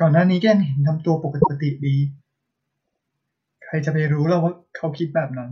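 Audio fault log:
1.40–1.56 s, repeated frames: a block of compressed frames, about 157 ms (which fits roughly six frames), was sent twice, so the decoder replays it as a stutter that adds 157 ms.
2.84–2.99 s, repeated frames: a shorter 78 ms block (which fits three frames) arrived three times in all, so its two extra plays stutter and add 157 ms.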